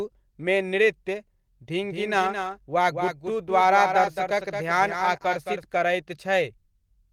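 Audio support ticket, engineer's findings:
Doubled audio track, 1.83 to 5.63 s: likely a second capture path or misaligned edit mixing in a duplicate copy. Full-band echo trails about a fifth of a second behind, about 5 dB down, dry, starting and stopping abruptly. Light Opus hybrid coding beneath.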